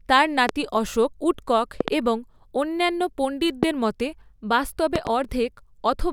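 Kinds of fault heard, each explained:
Loud pop: sharp pops over the speech at 0.49, 1.81–1.90, 3.63 and 4.96–5.09 s. The second and fourth are double pops, all peaking roughly 15–20 dB above the speech, which continues underneath. The likely cause is a voltage pulse from a switch, connector or static discharge.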